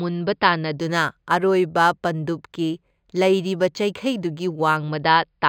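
From 0.80 s to 4.77 s the speech shows imaging from linear upsampling, which fits a rise from about 11 kHz to 48 kHz done by straight-line interpolation. That crude filter dulls the top of the original band and leaves a fainter mirrored copy of the spectrum, first spanning 5.5 to 11 kHz, roughly 30 dB down, heard as a faint metallic shimmer on sibilants. A spectrogram shows a dim reflected band above the speech energy.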